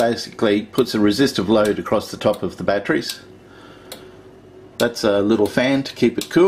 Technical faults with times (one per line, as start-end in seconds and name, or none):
none